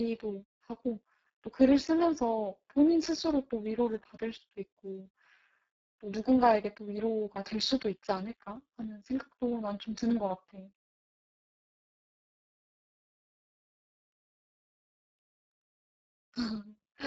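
Speex codec damage runs through the whole clip. The CELP coder has too few bits to model the excitation, so the speech comes out noisy and hoarse, edging toward robotic. The heavy degradation fits a very low setting around 6 kbps.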